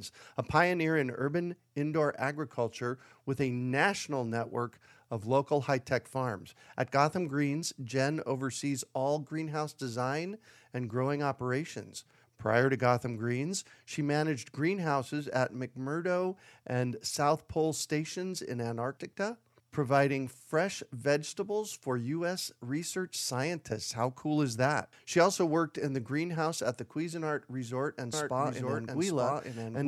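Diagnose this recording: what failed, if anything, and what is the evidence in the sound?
A doubled audio track starts abruptly at 28.13 s and lasts to the end. A full-band copy of the speech trails about a second behind, at roughly equal level, with no decay or room colour. Likely cause: a second, slower capture path feeding the mix.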